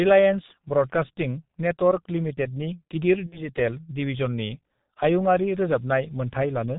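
From the first moment to the last, the speech carries the sound of the G.723.1 codec, and it's heavily damaged. Nothing gets through above about 4 kHz, so the whole thing is dull and boxy. The voice model updates in slow 30 ms steps, which makes the tone hoarse and smears the consonants together. That coarse texture fits the codec's 6.3 kbit/s mode.

Between 3.26 and 3.44 s there's VoIP packet loss concealed by the speech codec. About 60 ms of audio never arrived, which fits two lost 30 ms frames. The decoder covered the hole by stretching out its last pitch and filter settings and turning the level down frame by frame, so you hear a brief, fading smear. Each frame builds on the one before, so the speech stays weak and a bit distorted for a little while after it returns.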